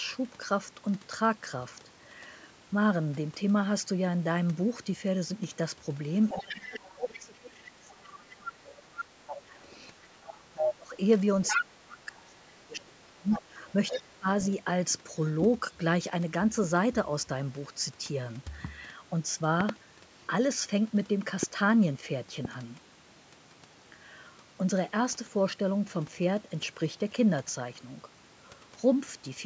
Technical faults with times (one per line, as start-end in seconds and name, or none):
6.29-7.53 other side's voice leaking through
6.34-10.95 speech suppressed in double talk
8.31-9.61 other side's voice leaking through
10.14-10.74 other side's voice leaking through
11.44-11.65 other side's voice leaking through
11.56-14.28 speech suppressed in double talk
12.79-14.52 other side's voice leaking through
19.61-19.71 loud pop
21.43-21.45 loud pop
22.45-22.47 loud pop